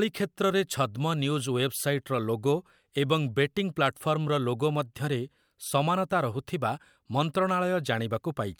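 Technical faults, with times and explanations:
Nothing technical stands out here; the speech runs along without any glitches worth flagging.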